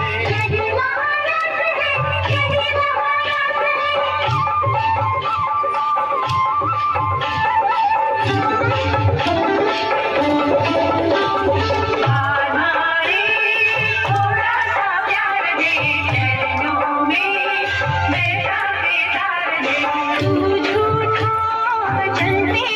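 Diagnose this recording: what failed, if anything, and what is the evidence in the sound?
Nothing here gives me anything to point at, since I can't hear a dropout, click, distortion or glitch anywhere in this recording.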